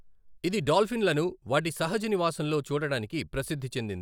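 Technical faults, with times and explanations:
Nothing in this bit of speech stands out as a technical fault; there's nothing here to flag.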